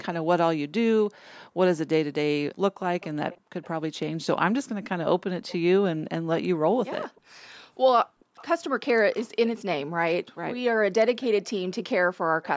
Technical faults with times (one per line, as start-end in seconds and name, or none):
1.10-1.49 background gated by the echo canceller
3.01-3.99 echo leak
3.39-3.50 background gated by the echo canceller
5.48-5.57 echo leak
7.11-8.36 background gated by the echo canceller
8.36-8.46 echo leak
11.21-11.50 echo leak
12.21-12.44 background gated by the echo canceller